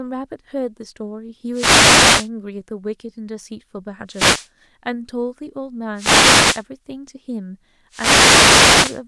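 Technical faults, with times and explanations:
1.52–2.29 s, 4.08–4.49 s, 5.94–6.64 s and 7.90–9.02 s: wireless microphone noise hits. Four bursts of static wash over the voice, the last running nearly to the end. What's going on is the analogue FM radio link from the mic dropping out: reflected copies of the signal arrive out of step and cancel, so the receiver's own noise surges up and you get that brief swishy hiss sitting on top of the speech until the signal recovers.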